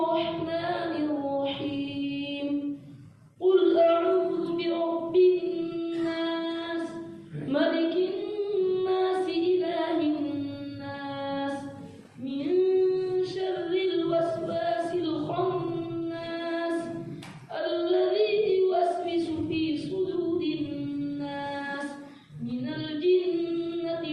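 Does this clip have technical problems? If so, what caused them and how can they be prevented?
No, this clip has no technical problems, so there is nothing to prevent.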